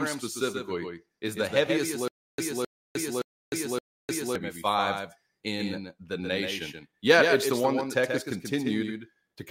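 From the start, a second capture path or misaligned edit likely mixes in a doubled audio track: a dry copy about 5 dB quieter trails by roughly 150 ms, giving a hard slapback echo throughout.

From 2.08 to 4.35 s, after "specifically is the heaviest", the stream likely stalled and retried, causing a stutter with silent gaps: a 0.26 s fragment repeats four times, each followed by 0.30 s of dead silence, before "five in the nation".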